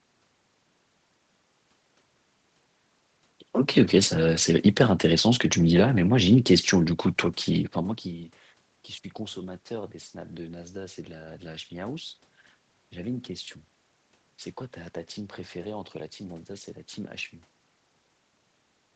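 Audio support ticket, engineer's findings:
Nothing wrong found on this one: the speech sits within the usual 8 kHz call band with some room noise behind it, and the level shifts around 7.5 s and again near 17.5 s are just the talker moving relative to the mic.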